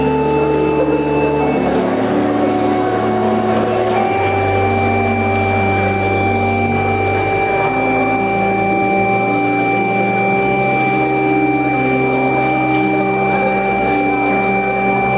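Nothing here is technically wrong; the sound just carries the narrow, phone-like top end you'd expect from a call line, with nothing above about 4 kHz, which fits a standard G.711 mu-law codec.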